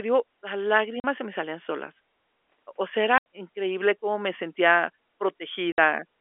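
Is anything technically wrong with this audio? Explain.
Yes. Three sudden dropouts with hard edges chop the speech at 1.00 s (40 ms), 3.18 s (80 ms) and 5.72 s (60 ms): packet loss filled with silence, where lost packets were replaced by silence. The gap lengths fit 20 ms packets. The narrow telephone-band sound comes from the G.711 telephone coding.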